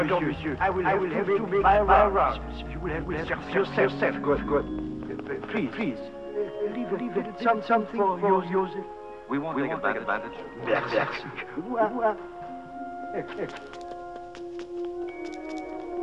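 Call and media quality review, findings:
Doubled audio track, whole clip: every sound heard twice, second copy about 200 ms behind at roughly equal loudness, full band, no decay or room colour. Likely cause: same signal captured again through a slower path, or an edit holding two out-of-step copies, summed into the mix.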